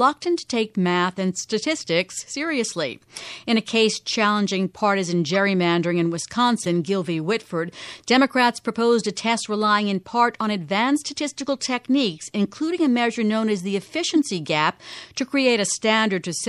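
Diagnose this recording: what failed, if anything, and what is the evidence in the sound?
Codec stage: the speech has a watery, swirly quality throughout, with smeared consonant attacks, which is plainly audible MP3 compression, likely at a low bitrate around 64 kbps. A spectrogram would show a hard treble ceiling and sparse, flickering high-frequency bins that switch between frames.

Decoding or storage stage: corrupt frames were decoded at 5.34 s, at 6.63 to 6.67 s (each about one frame), and at 14.11 to 14.18 s (about three frames). Each is a brief chirp or noise burst peaking around -15 to -20 dBFS. Damaged gains and codes placed energy at the wrong frequencies, which shows as isolated vertical smears on a spectrogram and as short spikes in the waveform.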